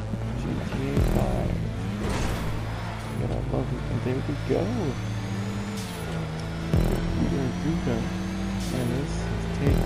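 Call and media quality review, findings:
No faults found: no dropouts, level jumps, distortion or timing irregularities anywhere in the signal.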